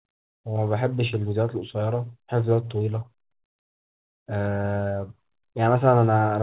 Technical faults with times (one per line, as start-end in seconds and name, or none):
none